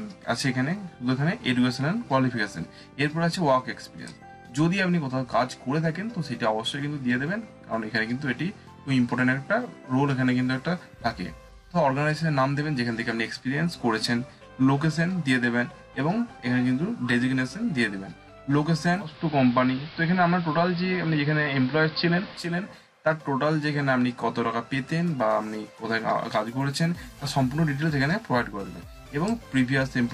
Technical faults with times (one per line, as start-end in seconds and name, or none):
18.98-22.64 digital radio blending to analogue